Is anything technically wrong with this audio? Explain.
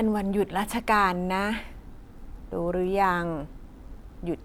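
No, nothing technically wrong stands out here; the speech comes across fine all the way through.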